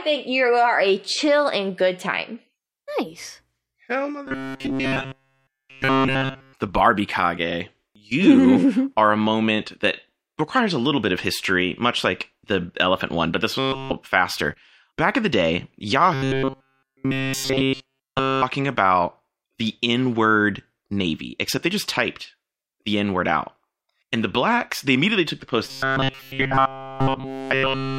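Robotic sound from repeated short buffers hits at 4.26–6.54 s, 13.59–13.93 s after "elephant one but this", 16.14–18.43 s between "in the day" and "about the", and 25.65–27.99 s after "they immediately took the". The speech collapses entirely into a rigid metallic buzz at 134 Hz, likely from a roughly 7.5 ms chunk looping while fresh audio failed to arrive.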